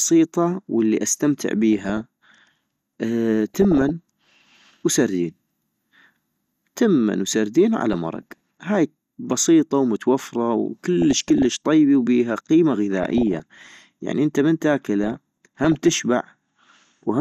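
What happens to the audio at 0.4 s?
MP2 compression damage is audible at 0.4 s and continues through the whole clip. The speech sounds dull and carries a gurgling, granular roughness, most likely from MPEG Layer II coding at a low bitrate, which fits about 80 kbps. The codec divides the signal into 32 equal sub-bands and shares out a limited bit budget, so upper bands drop out and flicker while the remaining ones are quantised coarsely.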